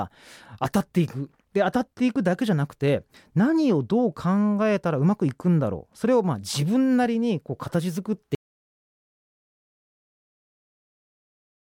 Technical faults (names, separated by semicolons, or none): audio dropout to silence